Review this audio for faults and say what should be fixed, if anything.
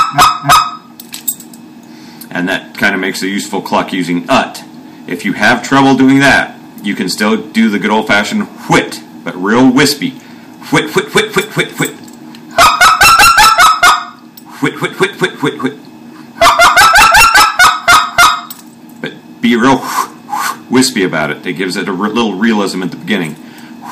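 A harsh fuzz sits on every loud moment from start to finish, with peaks sounding gritty and torn rather than crackling only now and then. This is hard clipping: the signal was driven roughly 19 dB past what a stage in the chain could pass, so its peaks were sliced flat, catching something like 7 percent of the audio. Those squared-off tops add harmonics high in the spectrum, which is the brittle edge heard throughout. To prevent it, set gain so peaks stay below full scale at every stage, leaving headroom before conversion or format changes.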